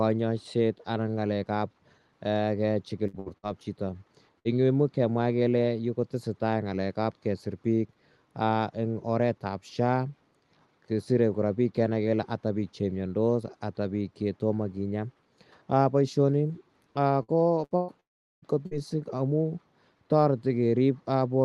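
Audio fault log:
3.07–4.48 s and 17.23–18.86 s: repeated packet loss (robotic sound). Four short holes in each stretch, the longest about 62 ms and then 117 ms. Each is patched by stretching the last sound. Roughly a fifth of each stretch is concealed, so the speech turns choppy with pieces missing.
18.00–18.45 s: long network dropout. Audio stopped arriving, likely from a network outage. The receiver carried the last sound briefly as a fading buzz or hiss. Then silence holds for about 0.4 s. The speech resumes afterwards with that section missing.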